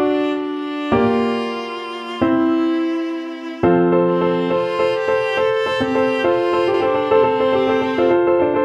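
From 6.74 s onward, a doubled audio track: an equally loud copy trails about 150 ms behind, likely via a slower second path, so waveform onsets appear twice.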